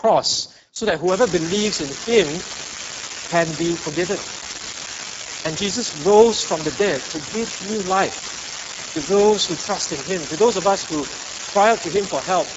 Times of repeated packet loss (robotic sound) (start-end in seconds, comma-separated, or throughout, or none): none